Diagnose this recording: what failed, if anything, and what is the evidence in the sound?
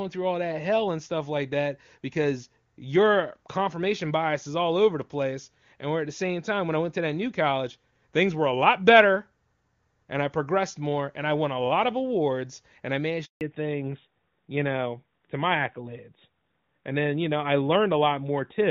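A handover gap in the network stage cuts the speech at 13.25 s: the sound fades out within a few tens of milliseconds and stays silent for 160 ms, until 13.41 s. No frames arrived while the call moved between networks, so that stretch of speech is simply lost. Unlike a packet-loss burst, the silence is a single clean gap that is not concealed or smeared, and the audio that follows is audibly different in band.

A fallback to narrowband in the codec stage follows straight after the gap, from 13.41 s to the end. Before it, the speech is clear wideband HD Voice, consistent with AMR-WB at around 23.85 kbit/s. After it, nothing above 4 kHz remains, and the speech turns duller and rougher, which fits a switch to AMR-NB at about 12.2 kbit/s. Low-rate wideband roughness would keep the 6.4 to 7 kHz noise fill. Here the whole band above 4 kHz is gone, and it disappears at the handover instant.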